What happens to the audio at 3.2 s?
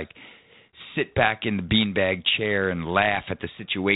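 Nothing goes wrong at 3.2 s: the speech runs on intact through that moment, with only the narrow telephone-band character of the 32 kbit/s G.726 ADPCM path it passes through.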